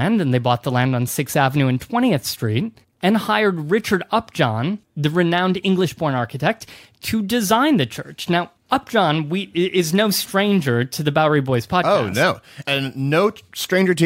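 Nothing stood out on listening to this speech recording.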